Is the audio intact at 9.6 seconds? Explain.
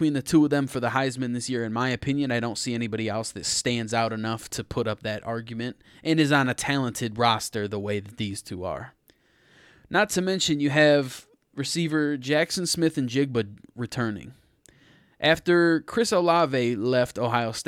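Yes, the speech at 9.6 seconds plays through cleanly, with no dropout, click, distortion or other fault at that moment.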